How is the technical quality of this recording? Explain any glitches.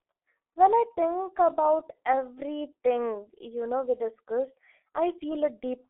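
Poor: heavy G.723.1 codec damage runs throughout. This low-rate telephony coding, consistent with roughly 6.3 kbit/s, keeps only the 300 Hz to 3.4 kHz line band and models the voice coarsely, so speech sounds muffled and hoarse with smeared consonants. A spectrogram shows a flat ceiling with nothing above 3.8 kHz.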